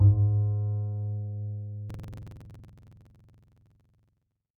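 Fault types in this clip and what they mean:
buffer tearing: From 1.86 s to the end, a steady 21.5 Hz rattle, which fits a 2048-sample buffer, rides on the sound as about a fifth of each period replays audio roughly 100 ms old. Unlike an underrun, nothing drops to silence, and the rattle exists only with signal.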